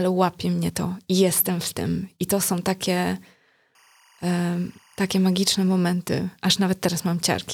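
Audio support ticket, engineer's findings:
Chirping two-tone warble behind the speech, 3.75 to 5.75 s, sitting roughly 35 dB under the voice. Timecode bleed: linear timecode at 24 frames per second leaking from an adjacent track or cable, its square wave flipping near 1 and 2 kHz.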